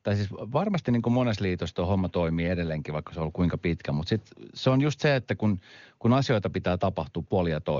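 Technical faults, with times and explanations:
Nothing stood out on listening to this speech, which passes through the AMR wideband (HD Voice) codec at its top rate of 23.85 kbit/s and so carries nothing above about 7.2 kHz.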